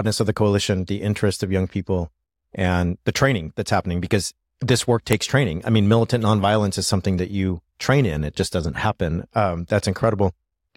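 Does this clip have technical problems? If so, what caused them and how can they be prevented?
Yes. At 5.13 s a file header was played as audio: two WAV pieces were joined without stripping the second one's header, so its bytes ran through as samples, producing a sharp, loud click. Strip headers before concatenating or streaming pieces.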